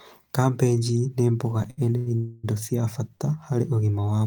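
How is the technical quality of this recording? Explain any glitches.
The speech has timing faults from network delivery: three short stalls from late packets and one longer call audio freeze, all with little or nothing lost.

Short stalls from a late packet occur at 1.70–1.79 s, 1.97–2.08 s and 3.15–3.22 s. In each, the next packet arrived late, the jitter buffer ran dry, and the receiver stretched the last sound for about 70 ms, 90 ms and 42 ms respectively. The speech then resumed from the same point. Each sounds like a held syllable with a slight buzz or dip, and the overall delay grows by the same amount.

A call audio freeze runs from 2.16 to 2.45 s, shortly after the second stall. For about 270 ms, the last sound is drawn out into a fading buzz or hiss that never reaches full silence. Speech then continues from where it stopped. The likely cause is a longer hold-up of packets that emptied the jitter buffer and forced the receiver to synthesise fill until delivery resumed. 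This adds roughly 270 ms of delay.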